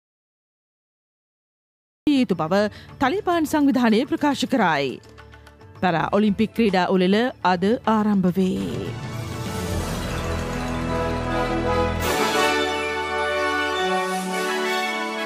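The audio opens in an audio dropout to silence. It is silence from the start to 2.07 s, with no room tone. The input was likely disconnected or muted.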